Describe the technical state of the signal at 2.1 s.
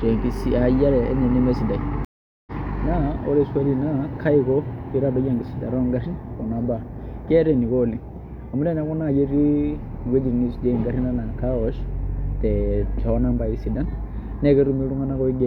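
Dead silence of about 420 ms from 2.05 to 2.52 s, with the speech resuming roughly 0.3 s further on: a stream reconnect, where the player lost its connection and restarted decoding mid-stream.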